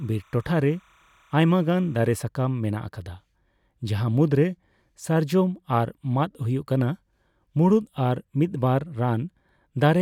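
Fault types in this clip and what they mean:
timecode bleed: Linear timecode from an adjacent track or cable has crosstalked into the speech channel. Its biphase square wave flips between pitches around 1 kHz and 2 kHz, producing a faint, steady chirping warble sitting roughly 35 dB under the speech. Here it runs from the start to about 2.18 s and then stops. Its regular rhythm fits 29.97 fps code bleeding through.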